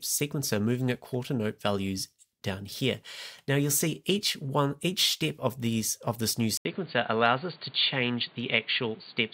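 At 6.57 s the audio drops out for 80 ms and comes back dull and boxy for the rest of the clip, with nothing above 4.6 kHz and a new background noise floor about 30 dB below the signal, though the overall level barely changes. This is likely an input switched to a poorer device, a narrower-band microphone or headset path. A spectrogram shows a brief blank gap and then a flat ceiling at 4.6 kHz. The waveform keeps a similar amplitude.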